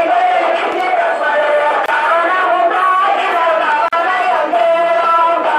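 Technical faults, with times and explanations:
1.86–1.88 s and 3.88–3.93 s, gap at a join of encoded pieces: the sound drops out for about 24 ms and then about 43 ms, two seconds apart, and resumes where it stopped. This points to 2-second segments encoded separately and concatenated without trimming, so each join keeps the encoder's start-up delay and last-frame padding as silence. The edges are smeared by the codec.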